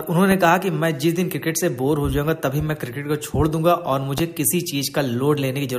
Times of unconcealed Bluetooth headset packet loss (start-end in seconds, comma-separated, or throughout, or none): none